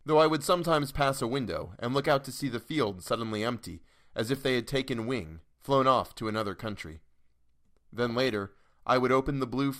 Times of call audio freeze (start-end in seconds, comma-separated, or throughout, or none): none